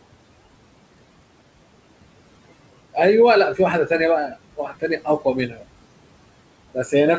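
Across the whole clip the background noise dips away between phrases and swells back underneath the speech. These are noise suppressor artifacts. The suppressor judges each frequency band frame by frame and lowers whatever it takes for steady noise, here by about 21 dB. The room noise, sitting about 16 dB below the speech, is therefore audibly pumping rather than staying even. The audio also stops at 8 kHz, which fits a wideband call codec such as G.722.

Between 4.56 and 5.26 s the speech turns faint and swallowed in places, with parts of it sinking toward the noise floor for roughly a third of a second in total and dropping by as much as about 17 dB. A shorter lapse follows from 5.48 to 5.64 s, dipping by about 13 dB. In both cases the noise suppressor cut the speech: it took the quieter parts of the speech for background noise and turned them down along with the background.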